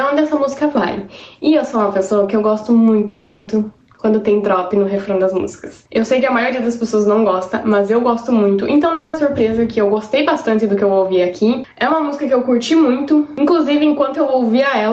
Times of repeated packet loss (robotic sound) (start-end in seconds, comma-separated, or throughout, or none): none